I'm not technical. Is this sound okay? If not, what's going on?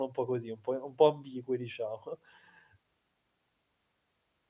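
Yes, nothing technically wrong can be heard anywhere in this speech recording.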